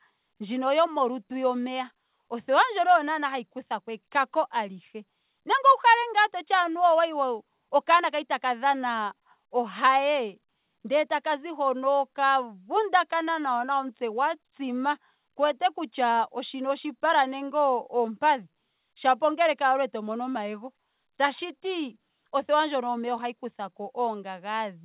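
Nothing in this speech goes wrong, and the only thing to notice is the call-path sound, with nothing above 4 kHz, which fits a G.711 A-law link at 64 kbps doing its ordinary job.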